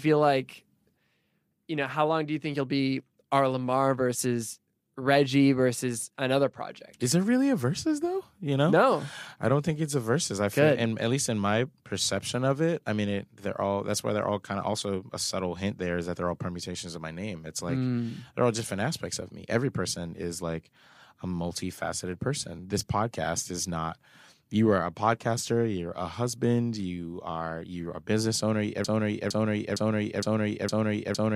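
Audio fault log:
28.85 to 31.36 s, broken-record loop: the speech stops moving forward and a single 0.46 s fragment plays five times, back to back and identical each time, running to the end of the clip. This is likely a stall in the player, encoder or stream, which kept sending the last piece of audio it still held instead of new material. The repetition is exact, so it sounds mechanical rather than spoken, and whatever should have followed in those final seconds is missing.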